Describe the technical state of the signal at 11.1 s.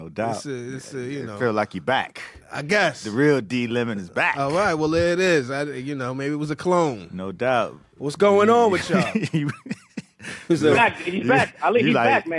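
At 11.1 s the signal is intact, with no dropout, distortion, glitch or other fault to be heard.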